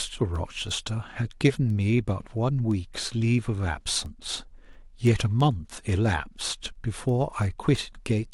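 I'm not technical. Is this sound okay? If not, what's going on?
No. From 0.36 to 8.10 s there are word clock ticks: about twenty sharp ticks of uneven strength, evenly spaced about a third of a second apart. Two connected devices are running on slightly different clocks, so a single sample keeps getting lost or repeated. The steady rhythm is what sets this apart from random clicks.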